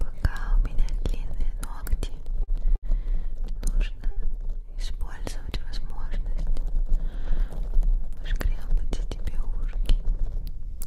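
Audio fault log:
2.43–2.51 s, 2.76–2.86 s and 4.11–4.20 s, short stall from a late packet: the sound briefly hangs with a faint buzz or dip, for 42, 70 and 52 ms. Each time the jitter buffer ran dry awaiting a late packet, so the last audio was stretched, then playback resumed without losing anything.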